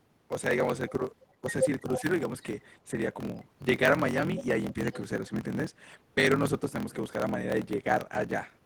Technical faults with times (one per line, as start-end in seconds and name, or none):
0.00-8.65 block size mismatch (truncated)
2.01-2.05 speech suppressed in double talk